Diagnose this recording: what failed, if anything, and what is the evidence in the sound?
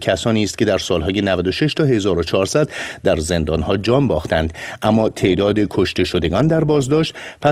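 At 3.54 s the speech changes abruptly to a sound with more codec artefacts, and it stays that way to the end. There is no gap or dropout at the switch. This is an adaptive stream at a lower bitrate, a fault at the network stage. When throughput fell, the player switched to a lower-quality rendition, which fits an Opus stream stepping down from 64 to 24 kbit/s. Packet loss would leave gaps or smeared fills. This is a clean, lasting step down in quality.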